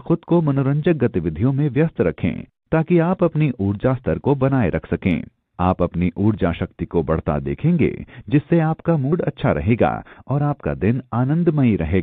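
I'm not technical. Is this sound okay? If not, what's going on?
No. At 9.12 s, compressed frames are skipped: about a twentieth of a second of sound is missing, so it jumps ahead.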